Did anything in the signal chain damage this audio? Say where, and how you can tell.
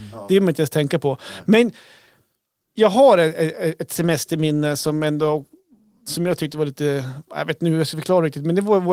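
Yes, a call bitrate drop at the codec, 3.96–6.65 s after "jag har ett ett". The coarse, muffled sound fits roughly 32 falling to 17 kbps, and the spectrogram's high band vanishes.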